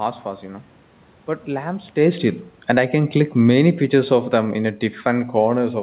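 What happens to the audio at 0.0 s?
Nothing goes wrong at 0.0 s; the audio is intact at that moment.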